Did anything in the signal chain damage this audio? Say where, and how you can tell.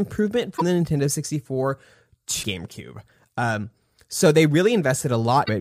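Yes, in the codec. Speech jumps ahead with brief glitches at 0.56–0.62, 2.42–2.45 and 5.45–5.49 s. Likely a broken MP3 bit reservoir: after dropped frames, the decoder reads wrong borrowed bytes.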